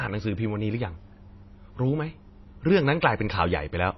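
Throughout the speech, the treble stops dead at 5.8 kHz, and weak spectral detail flickers in and out between frames, giving a watery, swirly texture with smeared consonant attacks. The damage is plainly audible, likely from MP3 compression at a starved bitrate, consistent with roughly 24 kbps.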